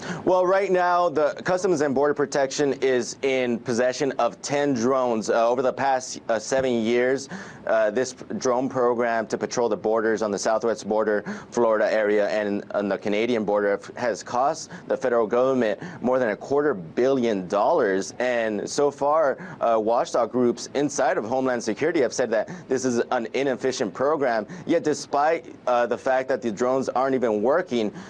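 No technical faults can be heard in this audio.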